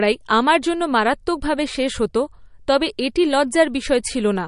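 MP3 compression, likely the cause of the damage heard throughout: the treble stops dead at 10.6 kHz, and the speech has a plainly audible watery swirl as weak frequency lines drop in and out between frames. The sound fits a bitrate near 40 kbps.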